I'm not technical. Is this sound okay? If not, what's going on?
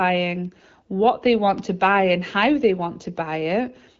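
No, not quite. You'll hear two sharp ticks, at 0.45 s just before "what they" and at 1.58 s right before "to buy and how". Each is a bit error spike: one or a few digital values briefly flipped to a wildly wrong number, then snapped back.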